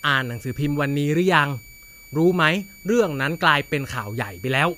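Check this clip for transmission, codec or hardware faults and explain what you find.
One hardware fault runs through the whole clip.

Switching supply whistle, present from start to finish: a power supply in the chain is switching at a rate that falls within hearing, so its ripple leaks into the audio as a thin, high whistle near 2.3 kHz. The pitch wanders slightly, between about 2.28 and 2.31 kHz, as the supply's load shifts. It sits roughly 25 dB under the speech.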